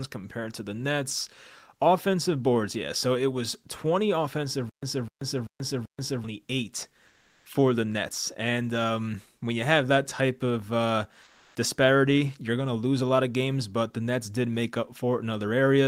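From 4.69 to 6.24 s there's a stutter with silent gaps: a 254 ms fragment plays four times, every 387 ms, with 133 ms of dead silence between, likely a stalled stream retrying. Then at 7.07 to 7.45 s and again at 11.23 to 11.55 s, the quiet background turns into smooth, featureless comfort noise, likely from discontinuous transmission in something like Opus DTX. It's about 2 dB quieter the first time and about 1 dB louder the second.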